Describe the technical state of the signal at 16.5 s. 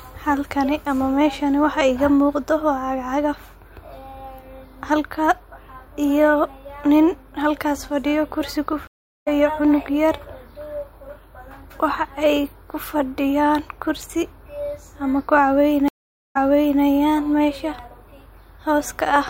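A stream reconnect runs from 15.88 to 16.82 s: the connection drops, leaving about 0.47 s of silence, then a fresh decoder starts mid-stream and the speech resumes roughly 0.46 s earlier than where it broke off, so a short stretch is heard twice.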